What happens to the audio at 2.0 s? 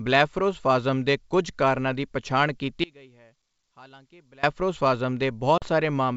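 Nothing goes wrong at 2.0 s: the speech carries on intact through its G.722 wideband coding at 64 kbit/s, with no audible break or distortion at that moment.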